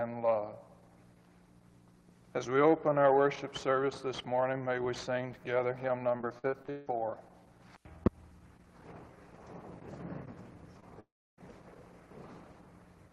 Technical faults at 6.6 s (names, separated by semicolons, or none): repeated packet loss (robotic sound)